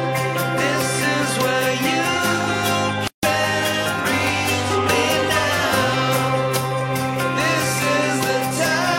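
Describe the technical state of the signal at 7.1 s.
At 7.1 s the signal is intact, with nothing there that a listener would pick out as a technical fault.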